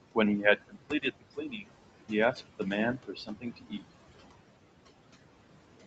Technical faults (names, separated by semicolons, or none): overdone noise removal; noise suppressor artifacts; speech cut by the noise suppressor